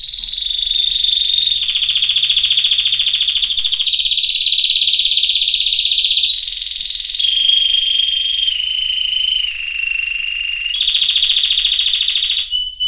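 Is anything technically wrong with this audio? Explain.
No, nothing technically wrong can be heard anywhere in this audio.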